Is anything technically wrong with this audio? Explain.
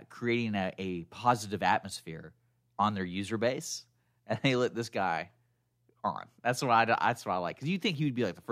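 No, nothing technically wrong can be heard in this speech recording; the signal holds steady and intact throughout.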